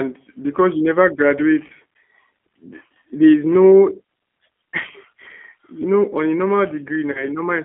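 G.729 codec damage runs through the whole recording: the speech is rebuilt at 8 kbit/s from a vocal tract filter, pitch predictor and sparse pulses, so it sounds plainly rough and synthetic, squeezed into a telephone band of roughly 250 Hz to 3.4 kHz.

VoIP packet loss concealed by the speech codec appears at 1.68 to 1.72 s, right after "because you never". The decoder fills the gap by extending its last pitch and filter, giving a brief smear, which fits about two 10 ms frames going missing.

A second concealed packet loss falls at 7.12 to 7.28 s. The extrapolated sound again fades in level, and because each rebuilt frame feeds the next, the speech stays weakened past the gap, which suggests roughly three lost frames.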